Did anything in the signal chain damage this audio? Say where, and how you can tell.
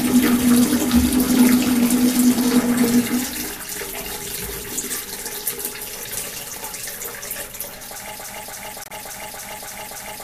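Yes. At 8.16 s the audio turns into a broken-record loop: a 0.29 s fragment repeats exactly, back to back, through to the end of the clip, seven times in all. The likely cause is a stall at the playback or streaming stage, where the player kept resending the last block it held. The sound that should have filled those final two seconds never arrives.

Inside that loop there is a second fault, a corrupt frame muted. From 8.84 to 8.92 s the audio drops abruptly to silence for about 87 ms. That points to the codec stage. Damaged bits made the decoder reject three consecutive frames, which fits frames of roughly 29 ms each, and the player substituted silence for them. The loop keeps its timing on either side of the gap.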